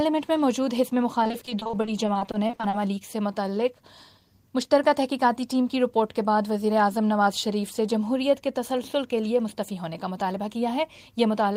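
Repeated packet loss (robotic sound) runs from 1.23 to 2.75 s. Over this stretch, data arrives late or not at all in a rapid series of short holes, none longer than 40 ms. Each hole is papered over by extending the sound that came just before it. About a third of the span, roughly half a second in total, is synthetic fill. The result is choppy, with pieces missing.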